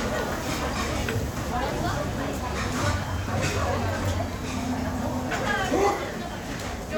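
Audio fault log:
Nothing to flag here; the sounds in this clip come through without any fault worth logging.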